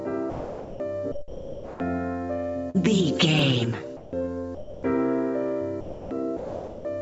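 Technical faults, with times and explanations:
0.30–0.80, 1.12–1.80, 3.97–4.13, 4.55–4.83, 5.81–6.11 and 6.37–6.85 s, sound dropped by the voice detector: The sound gives way to steady, featureless noise for 0.16 to 0.68 s each time. The sender's detector likely judged the sound as background and stopped transmitting. The receiver filled in comfort noise until sending resumed.
2.70–2.76 s, short concealed packet loss: About 40 ms of audio arrived too late for the decoder. The receiver extended the preceding sound to fill the hole, then blended back into the real signal. This is heard as a brief smear or wobble.
3.39 s, repeated buffer: One 5.33 ms block plays twice. New audio was not ready, so the device repeated its last buffer, which fits a 256-sample buffer. The hard join at the repeat makes a short click rather than an audible stutter.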